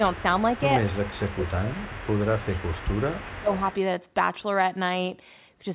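From 0.12 to 0.63 s, and again from 0.8 to 3.75 s, an echo leak is heard: a faint copy of the speech trailing about 207 ms behind, roughly 20 dB down. A far-end loudspeaker echo likely escaped cancellation and was sent back.

Inside that echo stretch the speech itself dips. This is speech suppressed in double talk, at 0.86 to 1.24 s, 1.45 to 1.83 s, 2.52 to 2.9 s and 3.22 to 3.48 s. The drops reach around 15 dB, about 10 dB in the third. Both sides likely talked at once, and the canceller turned everything down.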